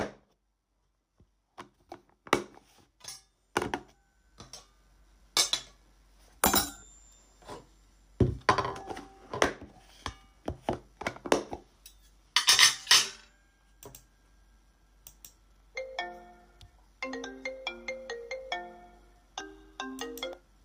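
At 19.41 s the sounds jump ahead without any silent gap, likely a dropped buffer (overrun) that discarded a few milliseconds before capture.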